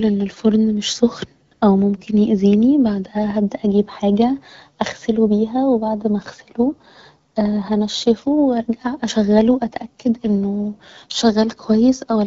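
A speech clip carried over AMR wideband, with light codec colouring that fits a 12.65 kbit/s rate. AMR comfort noise appears at 1.47 to 1.51 s and 1.53 to 1.61 s, after "ان الفرن مش سخن", and at 7.31 to 7.35 s, after "و بعد ما اغسله". The sender judged these gaps silent and sent no speech frames. The receiver filled them with smooth synthetic noise, so the real background drops out briefly.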